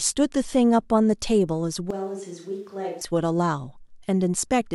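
Short speech clip, and from 1.91 to 3.01 s it suddenly goes hollow and roomy, about 10 dB quieter with more room noise, then snaps back, likely a switch to a distant microphone.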